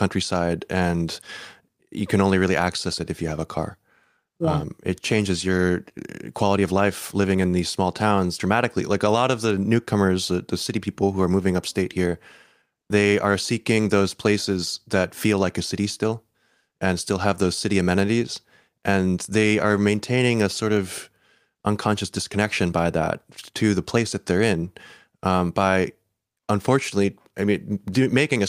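Clock drift between sender and receiver runs through the whole speech clip. The sender's clock runs roughly four percent fast. Audio arrives quicker than it is played out. The receiver's jitter buffer keeps filling, so it must discard material to keep up.

Repeated timing corrections follow from that, from 0.07 s to 28.39 s. The receiver keeps cutting short pieces to stay in step, matching a 104% sender speed. The cuts are small and unevenly spaced. If heard at all, they come across as slight hiccups or an unsteady tempo.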